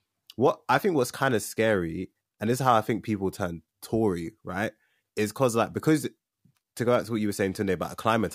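A speech recording, and nothing is technically wrong with it.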